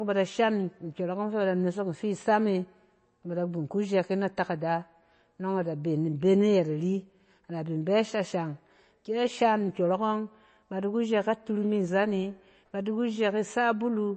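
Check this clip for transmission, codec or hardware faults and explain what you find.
Throughout the speech there is a watery, swirling quality, with sibilants chirping metallically and attacks smeared, and nothing above 8.3 kHz. This is likely MP3 compression at a starved bitrate, around 32 kbps, where the encoder cuts the treble and weak frequency lines flicker between frames.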